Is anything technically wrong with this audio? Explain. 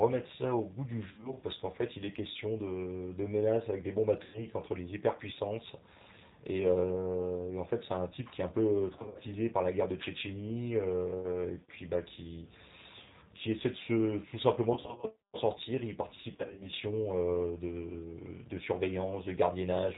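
Yes. The whole speech clip has the plainly audible mark of the G.729 codec at 8 kbit/s, and five short stretches are damaged by VoIP packet loss concealed by the speech codec.

The G.729 coding, which fits the G.729A variant, runs throughout. It rebuilds each 10 ms slice of speech from a vocal tract filter, a pitch predictor and a handful of pulses, discarding everything above 4 kHz. The voice sounds narrowband, rough and slightly synthetic. Unlike plain low-pass filtering, the texture itself is coarse and synthetic, not just dull.

The packet loss concealment falls at 1.05–1.35 s, 4.23–4.44 s, 8.97–9.23 s, 14.74–15.05 s and 16.34–16.74 s. The decoder fills each gap by extending its last pitch and filter settings at falling gain. The missing audio totals about 110 ms in each of the first two events, 130 ms in the third, 140 ms in the fourth and 180 ms in the last. In most events the losses are scattered over 200 to 380 ms, with runs up to 60 ms. 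Instead of silent dropouts or clicks, these stretches turn into brief buzzy or smeared tones that fade. The voice stays weakened for a moment after the losses end.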